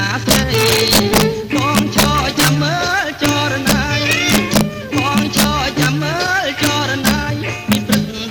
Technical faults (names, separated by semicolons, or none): integer overflow